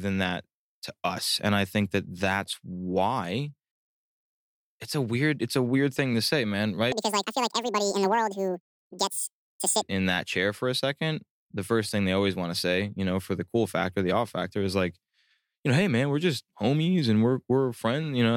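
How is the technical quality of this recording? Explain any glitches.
One glitch stands out in the speech. From 6.92 to 9.82 s, between "thing to say man" and "in that chair for", a section at the wrong speed plays 1.93 times fast, likely from playback against the wrong clock. The speech turns hurried and jumps about ten semitones higher. Unlike a pitch-shift fault, pace and pitch change together.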